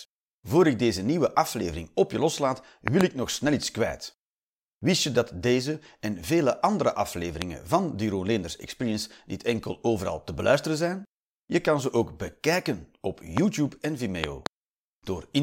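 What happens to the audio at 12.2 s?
Nothing goes wrong at 12.2 s; the speech continues cleanly through that moment with no audible fault.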